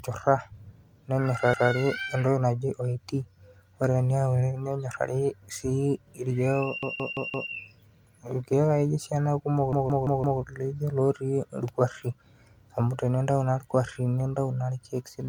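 The whole clip has a swirly, hollow, smeared quality with softened attacks, beyond what 96 kbit/s MP3 alone would give. That's likely generation loss from the speech being MP3-encoded a few times over, with quantisation noise and spectral holes stacking up.

On top of that come three repeated-buffer stutters. At 1.54 s a 171 ms chunk plays one extra time. At 6.83 s and again at 9.73 s a chunk plays four extra times, each running about 0.68 s. Hard joins mark every repeat, and the chunk length fits an 8192-sample buffer. Nothing appears to be skipped afterwards.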